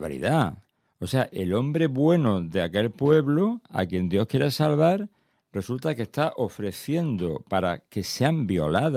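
A speech recording with nothing technically wrong with it.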